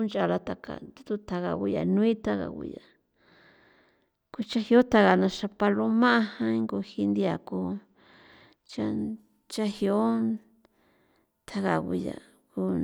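Channel delay (comb filtering) runs from 0.0 to 8.99 s of this speech clip: one channel lags the other by roughly two samples, around 0.05 ms, so summing to mono cancels shared content near 10 kHz, dulling the top end.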